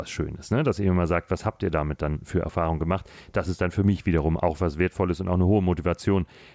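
Nothing stood out on listening to this speech recording.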